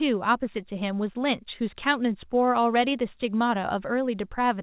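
The speech shows no technical faults, and the call path behaves as expected for its codec, with nothing above 4 kHz, which fits narrowband G.711 A-law coding at 64 kbps.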